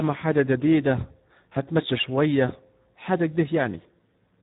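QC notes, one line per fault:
Throughout: Speex codec. The speech sounds hoarse and grainy because the CELP coder has too few bits to model the excitation and substitutes a coarse approximation. The damage is heavy, which fits a low setting around 8 kbps. On a spectrogram, energy stops abruptly at 3.8 kHz with nothing above, and harmonics look smeared and noisy. The waveform shows blurred, irregular pitch periods.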